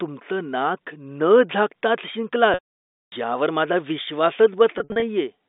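At 2.54 s there's packet loss with pitch repetition. About 580 ms of the signal drops out through 3.12 s, so the receiver loops the last pitch period, lets it fade over roughly 50 ms, and then there's silence until speech cross-fades back in on "यावर माझा". A second patch runs from 4.78 to 5.02 s, with 140 ms lost in short bursts of 60 ms at most. Each gap is bridged by a brief held, buzzy tone, and all of it sits inside the narrow G.711 telephone band.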